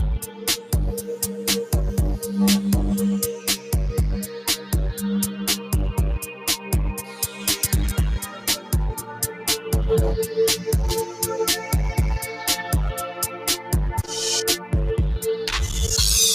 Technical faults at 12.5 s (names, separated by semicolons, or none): noise suppressor applied to music or sounds